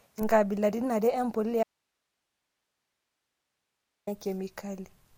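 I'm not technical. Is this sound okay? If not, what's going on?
No, not quite. At 1.63 seconds the speech suddenly cuts out and doesn't come back until 4.07 seconds, so you lose about two and a half seconds. That's an audio dropout to a faint residue: during the gap there's only a quiet hiss, far below the level of the talking. The break is sudden, not a natural pause or fade, so the likely cause is the signal getting lost for a moment while the recording line itself stayed switched on.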